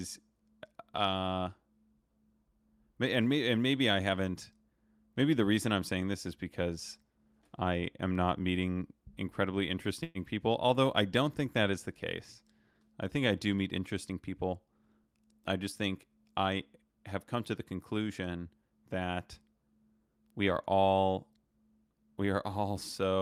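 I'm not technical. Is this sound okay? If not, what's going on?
No. There are two brief glitches.

A call audio freeze occurs from 10.03 to 10.18 s. For about 115 ms the speech stalls, and the last sound is stretched out into a short, fading buzz. This is likely because data packets were delayed in transit and the receiver's waiting buffer ran dry. When the packets arrived, the speech resumed exactly where it had stopped. Nothing was lost, but everything afterwards now plays about 115 ms later.

A jitter buffer speed-up follows from 14.09 to 14.67 s. The buffer was holding more audio than it aims for, so the receiver caught up by cutting many tiny slivers, each one or a few vocal vibrations long, totalling about 70 ms. For just over half a second the speech runs at roughly 111% speed. The pitch stays the same, but the talking sounds rushed.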